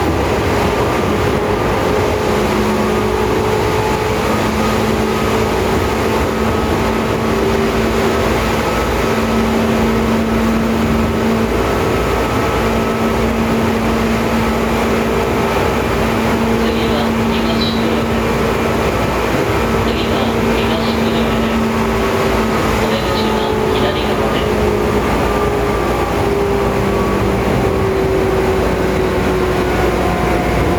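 The clip has gain pumping throughout. The gain swings by around 5 dB. Loud and soft passages sit close in level, and the sound is squashed. The likely cause is gain set far too high, with a fast limiter or compressor pulling it down.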